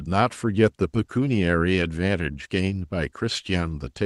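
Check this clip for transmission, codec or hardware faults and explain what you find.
Nothing wrong found in this speech: the WebRTC call path shows only its normal coding, with the top end rolled off in a way that fits a 12 kHz Opus bandwidth setting.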